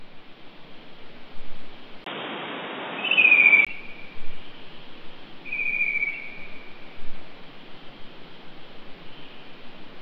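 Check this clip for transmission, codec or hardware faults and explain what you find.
One fault is present: from 2.04 s to 3.67 s the sound behaves as if the input switched to a poorer device. At 2.04 s there is a gap of about 20 ms, after which the audio turns dull and boxy, with nothing above 3.8 kHz, a level shift of roughly 5 dB and a new noise floor around 35 dB below the signal. The likely cause is the system changing its input to a narrower-band microphone or headset profile, which brings its own tone, level and noise. At 3.67 s the full bandwidth returns.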